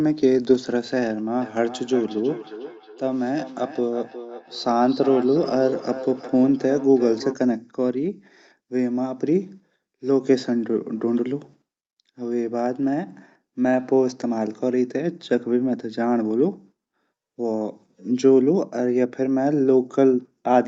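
Speech with a feedback echo between two devices from 1.41 s to 7.37 s. Each phrase returns at a fixed spacing of roughly 0.4 s, thinner and more ringing than the original, peaking at about 13 dB below the speech. That evenly spaced, degrading return sets it apart from ordinary room reverberation, which smears sound continuously. The cause is a second device in the room replaying the call while the first device's microphone picks it up again, outside the reach of its own canceller. The audio stops at 8 kHz, consistent with the call codec's bandwidth.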